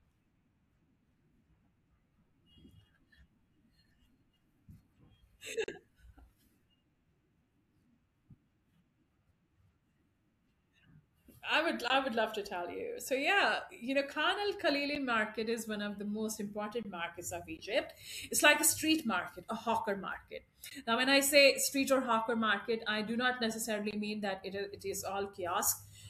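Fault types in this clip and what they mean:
block of digital silence: Abrupt cuts to silence of 8 to 40 ms, heard as ticks or short holes in the speech, where stretches of samples were replaced by zeros.
Bluetooth dropout: Two brief holes of about 15 ms, near 17.6 and 20.7 s, with the speech resuming as if it had played on, likely from late Bluetooth packets being dropped.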